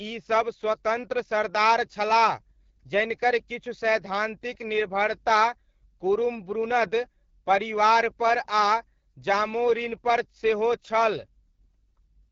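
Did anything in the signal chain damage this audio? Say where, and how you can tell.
Yes. Codec stage: AMR wideband (HD Voice) throughout. Speech sounds rough and raspy, nothing above 7.5 kHz. That fits a low rate near 8.85 kbit/s.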